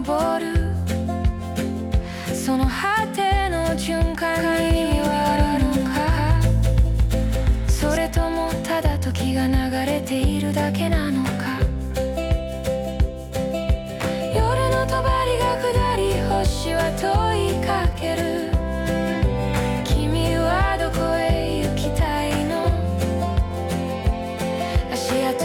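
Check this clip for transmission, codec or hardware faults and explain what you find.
One fault: a doubled audio track from 4.39 s to 7.97 s. A second copy of the signal, likely captured again through a slower path, is mixed in about a fifth of a second late at roughly equal level, giving a dry, full-band echo that starts and stops abruptly.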